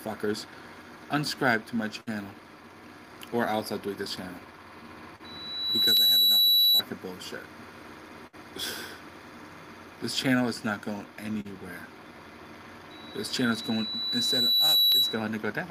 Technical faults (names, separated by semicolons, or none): loudspeaker feedback squeal; dropped samples